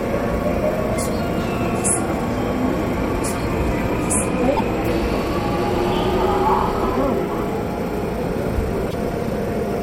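At 4.56 s the everyday sound jumps ahead with a brief garbled glitch lasting to 4.60 s. The same thing happens again from 8.90 to 8.94 s. Each glitch is about 44 ms long, under two MP3 frames of 26.1 ms each. A broken MP3 bit reservoir is the likely cause. Frames were lost, and the next frame reached back for borrowed data. It found unrelated bytes instead, so it decoded briefly as garbage.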